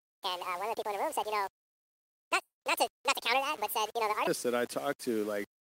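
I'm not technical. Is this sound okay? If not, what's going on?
No. From the start to about 4.27 s, the speech was most likely played back on the wrong clock, a section at the wrong speed, running about 1.81 times too fast. Voices come out hurried and close to an octave higher than normal, with pitch and pace changed together.

Between 2.41 and 2.64 s there's a call audio freeze, most likely from data arriving late over the connection. The last bit of sound is stretched into a fading buzz, then briefly goes quiet. Nothing is lost, but the speech resumes about 0.2 s late.

All the way through, the sound was most likely stored with far too little detail and rounded off without dither, which is low bit depth without dither. The result fits roughly 6 bits. It adds a gritty, grainy roughness that follows the speech, most noticeable on quiet parts.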